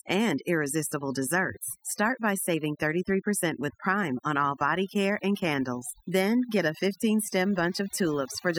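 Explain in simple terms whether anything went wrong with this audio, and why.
From start to finish, the pauses drop to near silence with twinkling specks. That is overdone noise removal: a cleanup tool set too strong shut off quiet bits of the voice along with the noise.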